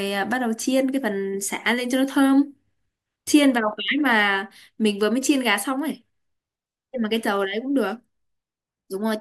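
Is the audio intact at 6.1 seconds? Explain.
Yes, at 6.1 seconds the speech plays through intact, with no dropout, click, distortion or other fault at that moment.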